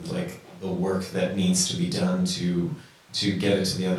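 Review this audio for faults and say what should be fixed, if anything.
Nothing here needs fixing, as there are no audible faults anywhere in this speech clip.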